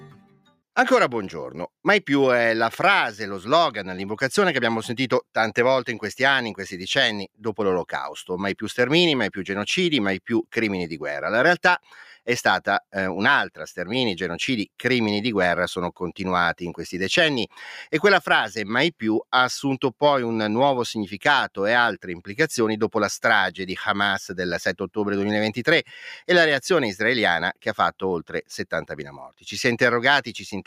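Right at the start, from 0.01 to 0.56 s, the sound is cut by the noise suppressor, which misjudged it as noise and pulled it down by up to about 12 dB for roughly half a second. The waveform's opening envelope looks squashed, and the spectrogram shows faded energy there.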